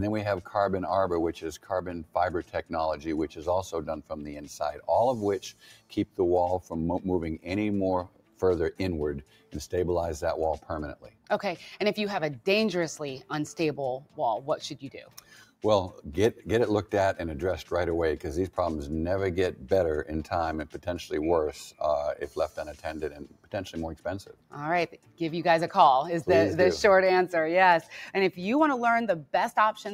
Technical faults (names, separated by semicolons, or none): noise suppressor applied to music or sounds; sound cut by the noise suppressor